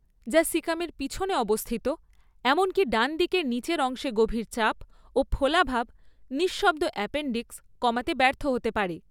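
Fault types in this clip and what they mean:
No technical faults are audible.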